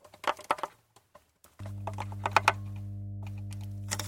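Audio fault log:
1.60–4.07 s, mains hum: A steady low tone at 50 Hz comes in at 1.60 s and runs to the end. It sits only about 5 dB below the sound itself, so it is plainly audible. A few low harmonics give it a buzzy edge. This is power-line interference. A ground loop or a nearby transformer is coupling the 50 Hz mains supply into the signal path. The tone does not change with the sound.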